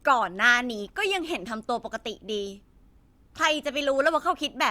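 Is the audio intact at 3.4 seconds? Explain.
Yes, at 3.4 seconds the speech plays through without any audible fault.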